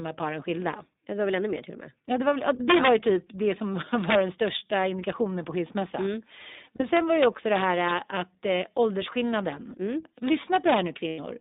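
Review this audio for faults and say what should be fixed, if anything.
The whole clip has passed through the iLBC codec, which codes each frame's excitation independently. The band is confined to roughly 200 Hz to 3.7 kHz, and the frame rhythm fits 20 ms frames in the 15.2 kbps mode. The speech has a plainly audible rough, synthetic edge, and everything above 3.7 kHz is missing. To prevent it, carry the call on a wideband codec such as Opus, or at least avoid transcoding through iLBC where quality matters.

Integer overflow occurs at 2.70–2.89 s, 4.10–4.15 s, 6.97–7.92 s and 10.55–10.77 s. A gain or summing stage wrapped to the opposite sign instead of saturating. It was overdriven by about 3 dB, about 4 dB, about 1 dB and about 3 dB respectively. Each peak past the limit flips across the full range, so the loud parts of the speech break into violent cracks that are far harsher than ordinary clipping. 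To prevent it, use saturating arithmetic or a limiter ahead of the integer stage.

Lost iLBC frames occur at 6.76–6.82 s, about 40 ms of audio, consistent with two 20 ms frames, and at 11.08–11.20 s, about 100 ms, pointing to five frames. The decoder filled each gap by repeating the last pitch cycle mixed with noise. Each gap sounds like a held, slightly buzzy vowel, and the speech snaps back almost at once. To prevent it, improve network reliability, add a jitter buffer, or add redundancy such as FEC.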